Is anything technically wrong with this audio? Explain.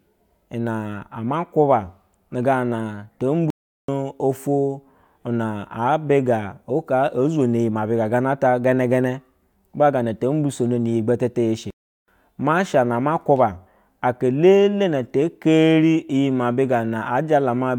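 Yes. The speech cuts out twice: from 3.50 to 3.88 s, just after "gana to" and resuming at "oto na", and from 11.70 to 12.08 s, right after "gana to mbisoniyi gbetete". Each gap lasts about 0.38 s of dead silence in mid-flow before the sound carries on. This is a playback stall. The likely cause is that the player briefly ran out of buffered data or had its output thread blocked, so nothing reached the output until it recovered.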